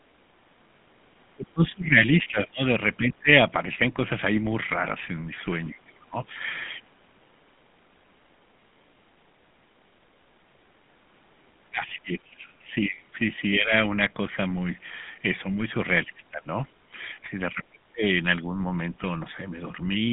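Throughout, GSM full-rate coding gives the speech a buzzy, gravelly roughness, which fits 13 kbps; the spectrogram shows a 150 Hz to 3.5 kHz band, empty above 3.8 kHz.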